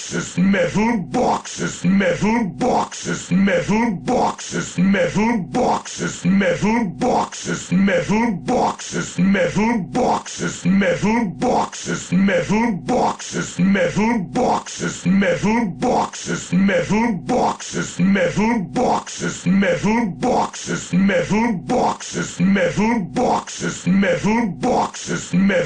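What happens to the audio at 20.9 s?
Nothing goes wrong at 20.9 s; the audio plays through that moment intact, with no dropout, click, distortion or other fault.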